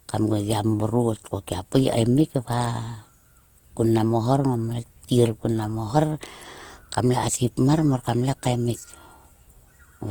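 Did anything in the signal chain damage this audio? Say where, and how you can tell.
Yes. Opus compression at the codec stage runs through the whole clip. The speech turns rough and grainy, with tonal parts smeared into noise, yet the band still reaches about 20.2 kHz. That points to a 24 kbps encode, likely CELT mode filling starved bands with folded spectrum or noise.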